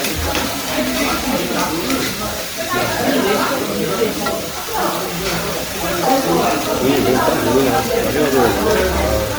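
Throughout, the sound has a swirly, smeared, hollow character, with blurred attacks and nothing above about 20.1 kHz. This generation loss likely comes from around seven MP3 passes, each requantising on a shifted frame grid, at a rate pointing to roughly 92 kbit/s.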